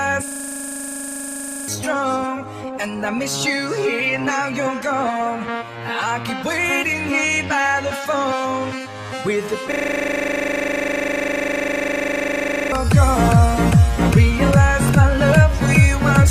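You get two stretches of system hang loop here, from 0.28 to 1.68 s and again from 9.72 to 12.72 s. Each time the machine or driver stalled while the sound hardware kept replaying the same 40 ms chunk of its ring buffer. At 25 repeats a second that's a rapid, buzzy stutter rather than a clean tone. Roughly a second and a half of audio goes missing in the first stall and about three seconds in the second.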